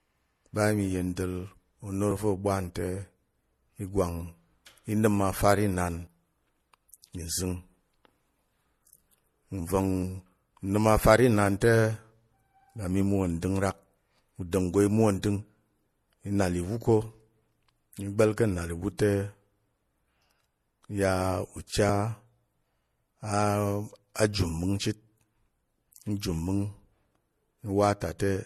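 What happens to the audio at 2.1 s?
At 2.11 s the sound skips: roughly 40 ms goes missing and the two sides butt together with no gap. This is audio missing between chunks, likely from a recorder that closes one block and opens the next, consistent with about 4-second chunks, and losing a sliver at the seam. On the waveform the envelope jumps abruptly at that point, and the spectrogram shows a vertical seam where the texture changes without any silent gap between the two sides.

The same moment also carries the clip-wide signature of transcoding between lossy codecs. The spectrogram is empty above 12.8 kHz, and the swirly, smeared artefacts of two different codecs are stacked on each other. That mix points to an MP3 at 64 kbit/s re-encoded as AAC-LC at 48 kbit/s, each stage degrading the sound in its own way while the lowest cut-off in the chain persists.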